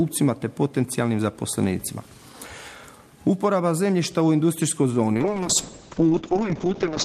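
At 5.14 s a call bitrate drop sets in and lasts to the end of the clip at about 7.05 s. The bandwidth estimate collapsed, so the encoder fell from 64 kbps to 7 kbps, and the audio band narrowed from 20 kHz to 8 kHz. The sound turns muffled and rough, with a watery smearing, and never recovers. A spectrogram shows everything above 8 kHz abruptly cut off at 5.14 s, with coarse, blocky energy below it.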